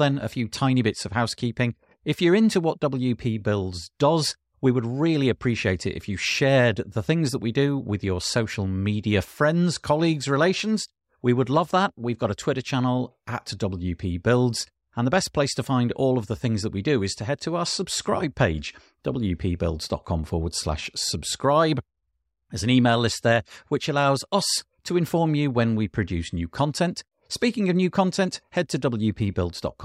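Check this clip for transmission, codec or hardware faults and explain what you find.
No transmission, codec or hardware fault can be heard in the speech: the signal carries on without interruption or damage from one moment to the next.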